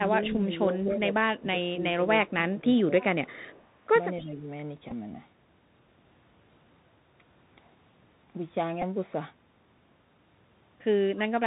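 Throughout, the Bluetooth CVSD headset codec narrows the sound to telephone band, with nothing above 4 kHz. Its one-bit up/down coding at 64 kbps leaves a granular hiss under the speech and scratchy s sounds where the step size cannot keep up. That grain and overload set it apart from simple low-pass filtering.

From 0.0 to 1.05 s, then 1.4 to 3.45 s and 4.18 to 4.49 s, the speech dips and dulls in pieces, by about 10 dB in the first and last stretches and about 15 dB in the middle one. This is speech suppressed in double talk, likely an echo canceller turning the talker down while the far side also spoke. The voice sinks and loses its top end rather than cutting to silence as a dropout would.

Around 0.91 to 0.95 s, and again from 3.26 to 3.68 s, a faint copy of the speech trails 275 ms behind at about 30 dB below it. This echo leak likely comes from a loudspeaker echo the canceller failed to remove. 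It is a distinct delayed repeat, not the smooth tail of room reverberation.

At 4.89 to 4.93 s, scattered losses totalling 18.8 ms are filled by a Bluetooth headset packet repeated. Each 3.75 ms chunk is decoded again, giving brief buzzy ticks, with runs of about 10 ms at most. At 8.82 to 8.84 s, 11.2 ms is patched the same way. Because the repeats fill the gap, there is a short buzz near 267 Hz instead of a silent hole.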